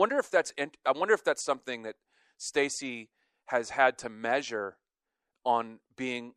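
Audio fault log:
Nothing to log here; this speech recording comes through without a single fault worth noting.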